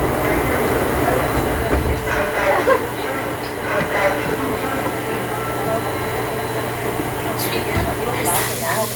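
No audible technical faults.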